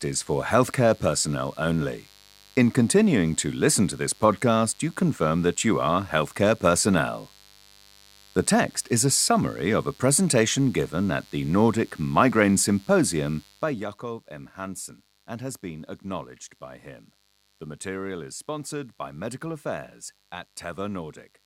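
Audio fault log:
throughout mains buzz: Interference from a switching source such as a dimmer or rectifier, or a gap in shielding, is getting into the signal path at the 50 Hz mains rate. It puts sharp spikes in twice per cycle, and their harmonics climb well into the kilohertz range. The result is a steady, raspy buzz about 30 dB below the speech. It runs through the whole clip.
13.40–13.86 s zipper noise: A level drop of roughly 15 dB is applied in unsmoothed 2 dB increments, at about twenty steps a second, instead of as a continuous ramp. Each jump leaves a small discontinuity in the waveform. Over this half-second a fast ticking, zipping texture rides on the speech while the level falls.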